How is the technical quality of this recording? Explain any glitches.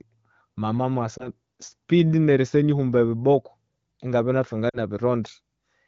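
Two short dropouts come from lost AMR speech frames. The AMR wideband (HD Voice) coding carries the speech clearly with only light codec colouring, as expected at a higher rate such as 15.85 kbit/s.

At 1.18 to 1.28 s, radio errors corrupted what sounds like a single 20 ms frame. The decoder reused the previous pitch and vocal tract settings at reduced gain, causing a brief dip or warble.

At 4.70 to 4.78 s, about 40 ms were lost, which fits two consecutive frames. Repeated concealment drops the sound to near silence within the two frames, then it returns weak or rough for a moment.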